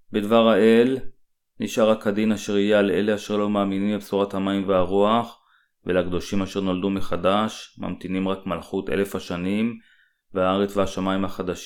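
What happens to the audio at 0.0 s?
Nothing goes wrong at 0.0 s; the audio is intact at that moment.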